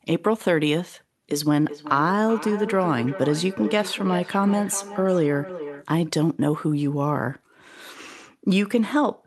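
A speech recording with feedback echo between two devices from 1.66 to 5.9 s. The speech returns roughly every 0.4 s, at most about 12 dB below the speech. A second device in the room replays the call, and the first microphone recaptures it.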